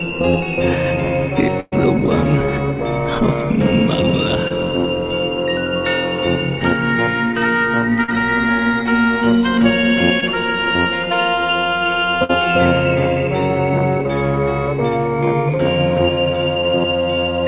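At 1.6 s a burst of packet loss removes about 120 ms of audio. The receiver covers roughly 117 ms of it by extending the last sound and fading it down, leaving a held buzz or decaying hiss with about 10 ms of silence before playback resumes at 1.74 s, further along. The material in between is gone.

Short concealed packet loss follows at 4.48 s, 8.04 s and 10.2 s, with about 20 ms, 40 ms and 20 ms missing. Each hole is filled by continuing the preceding sound, from its pitch if voiced or as shaped noise if not, before crossfading back. The result is a brief smear or wobble. The 8.04 s gap is the longest.

At 12.24 s a second burst of packet loss takes out about 60 ms. Roughly 52 ms is concealed with a fading extension of the last sound, and playback resumes at 12.31 s with that stretch missing. The whole clip sits inside a narrowband channel with nothing above 4 kHz, which fits G.711 telephone coding.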